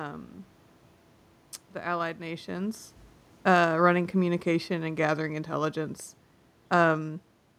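From 3.33 to 5.76 s, just after "the allied nations", automatic gain falling pulls the level down by about 5 dB as the gain control reacts to a loud input or strong background noise. Unlike the talker's movement near 2 s, the room noise sinks along with the voice.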